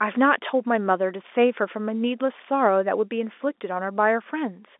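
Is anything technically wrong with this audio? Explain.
No, nothing is technically wrong: the speech carries an ordinary telephone-line character, with content confined to roughly 250 Hz to 3.6 kHz and nothing above 3.8 kHz, which fits G.711 telephone coding at 64 kbps.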